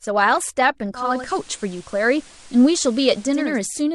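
Speech clip. At 0.93 s digital radio blends to analogue FM over 0.4 s, shifting level about 4 dB and adding faint hiss, until 3.60 s.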